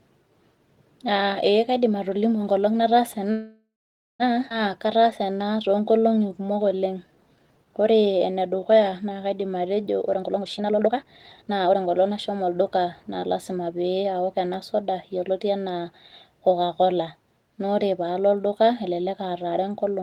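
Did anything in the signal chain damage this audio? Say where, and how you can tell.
Yes, and all of it traces to the network and jitter-buffer stage of a call. From 3.31 to 4.23 s there is a call audio freeze. The last sound is stretched into a fading buzz that ends in about 0.5 s of flat silence, roughly 0.88 s in all, and then the speech picks up where it left off with nothing lost. The likely cause is delayed packets draining the jitter buffer. On a spectrogram, the final spectral frame smears into horizontal bands that decay to blank.

Right after that, at 4.50 to 4.53 s, there is a skip ahead. About 0.7 s of speech is simply gone, and the two sides are butted together with only a tiny 8 ms fill. This is a stretch of audio dropped on the way or by the overflowing buffer while later audio was already waiting. In the waveform it shows as a hard splice where the envelope jumps abruptly. 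The spectrogram shows formant tracks that don't line up across the seam.

From 4.79 to 9.83 s a jitter buffer slow-down runs the speech at about 88% speed with the pitch unchanged. Sounds are drawn out, because the receiver repeated single pitch periods again and again, adding about 0.6 s in total to rebuild its reserve. On a spectrogram, harmonic spacing stays constant while vowels and pauses look horizontally stretched. In the waveform, closely spaced periods show near-identical repeats.

From 10.14 to 13.19 s the opposite happens: a jitter buffer speed-up plays the speech at about 129% speed, still at the same pitch, so it sounds hurried. Here the buffer had overfilled and cut short slices of one or a few pitch periods, around a second in all, to shrink its delay. Spectrogram features look horizontally compressed with unchanged harmonic spacing. The waveform shows small discontinuities where periods were excised.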